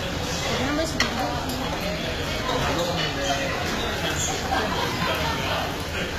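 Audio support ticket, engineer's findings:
HE-AAC compression, throughout the full clip. Treble gritty and metallic, harmonics misaligned above the crossover, nothing above 14.9 kHz. Codec damage plainly audible. Likely HE-AAC v2 spectral band replication: lower band coded, upper band copied up and shaped by a coarse envelope. Bright but synthetic top end, consistent with a very low bitrate around 20 kbps.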